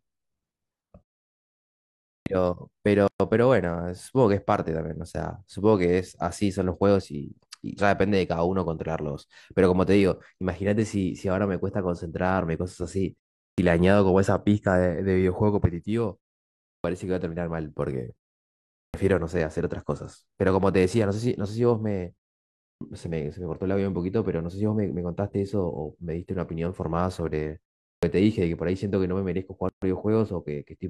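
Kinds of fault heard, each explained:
Clipped start after a pause: the output device drops into a sleep state during silence and takes time to wake, so the opening of the next phrase is lost. In this speech it happens six times, at 2.18, 13.5, 16.76, 18.86, 22.73 and 27.95 s, each time after a pause of roughly 0.4 to 1.2 s. About 80 ms is swallowed at each onset, so the first sounds are missing and the phrase starts abruptly out of silence.
Gap at a join of encoded pieces: the audio was encoded in separate segments and spliced without trimming the encoder's start-up delay and end-of-stream padding, leaving silence in the middle of continuous sound. Two such dropouts occur, at 3.08 s lasting about 122 ms and at 29.69 s lasting about 134 ms. The codec smears the edges of each, so the truly silent part is shorter, and the speech then resumes exactly where it broke off.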